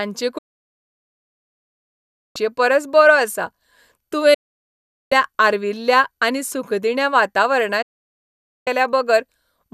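Digital broadcast dropout hits this speech clip three times: from 0.38 to 2.36 s, from 4.34 to 5.12 s, and from 7.82 to 8.67 s. Each time the audio fades to silence within about 8 ms and stays silent, because the receiver lost the signal or rejected corrupted frames and muted until clean frames returned. The speech sent during those gaps, about 2 s, 0.77 s and 0.84 s, is simply lost.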